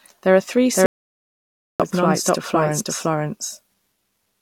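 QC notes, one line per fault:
throughout, doubled audio track: The speech was likely captured a second time by a slower path and mixed back in, so a full-band copy at about the same level trails the original by roughly half a second, with no decay or room colour, giving a clean, distinct repeat.
0.86–1.80 s, audio dropout to silence: The input likely lost its connection while the recorder kept writing silence, so the speech cuts off mid-flow into about 0.94 s of complete silence with no room tone, and whatever was said then is lost before the sound abruptly resumes.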